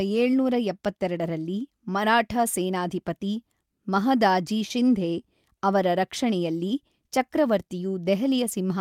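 No technical faults can be heard anywhere in this speech recording.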